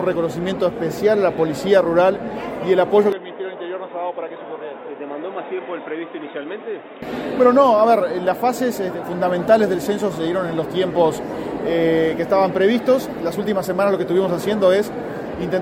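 From 3.12 to 7.02 s the audio turns dull and boxy, with nothing above 3.8 kHz, a drop of roughly 10 dB and a new noise floor, then clears again. This is likely an input switched to a poorer device. A spectrogram shows the top band vanishing and the waveform shrinks, with no gap at either switch.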